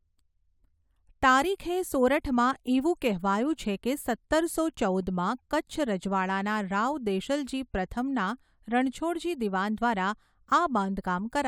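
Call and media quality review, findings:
No faults found in the speech audio; nothing to flag for any component.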